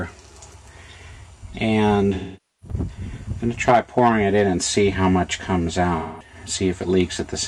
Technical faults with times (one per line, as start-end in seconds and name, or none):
2.14-2.76 AAC frame loss with concealment
5.98-6.35 AAC frame loss with concealment